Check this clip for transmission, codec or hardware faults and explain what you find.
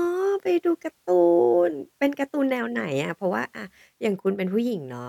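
Nothing in the recording points to a transmission, codec or hardware problem; the speech signal comes through intact and continuous, with no audible disruption to its level, timing or bandwidth.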